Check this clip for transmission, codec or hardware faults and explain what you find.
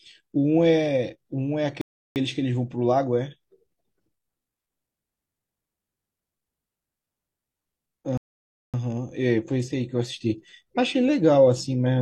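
Two rebuffering stalls interrupt the speech. At 1.81 s it drops abruptly into silence until 2.16 s, adding about 0.35 s; at 8.18 s it stops again until 8.74 s, adding about 0.56 s. Each time it picks up exactly where it left off, with nothing skipped. The player exhausted its downloaded audio, paused playback while waiting for more data, then resumed, so the gaps stretch the timeline without losing anything.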